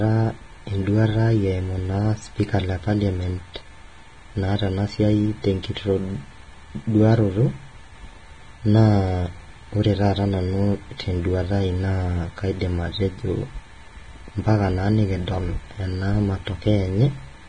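Vorbis compression, throughout: the speech is cut off above 9.7 kHz, with its treble quantised into grainy hiss, which fits heavy, likely low-bitrate coding around 24 kbps.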